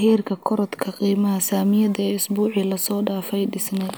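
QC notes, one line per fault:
Nothing to flag here; the speech comes through with no faults to note.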